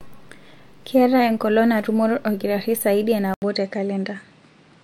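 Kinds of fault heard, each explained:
Input switched to a poorer device: at 3.34 s the speech drops out for about 80 ms, then continues to the end with nothing above 9.8 kHz, so it sounds duller and less airy than before. Loudness stays about the same, but a faint new background noise appears well below the speech. The brief gap and sudden change in bandwidth and noise character likely come from the recording input switching mid-clip to a narrower-band microphone or headset.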